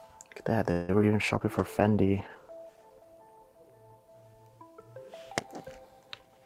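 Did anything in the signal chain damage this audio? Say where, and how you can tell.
Yes. Between 0.71 and 1.04 s there's repeated packet loss (robotic sound), a network problem: five gaps, the longest 173 ms, patched by stretching the last sound, so about two thirds of that span is concealment.

From 1.20 to 4.65 s you can hear a call bitrate drop, from 96 to 15 kbps, bottoming out for 1.38 s. The codec codes coarsely and loses the highs until the rate comes back.

Right at the end, 6.22 to 6.45 s, there's a jitter buffer speed-up. The buffer trimmed around 70 ms of pitch periods, so the audio runs at 122% speed at the same pitch and sounds hurried.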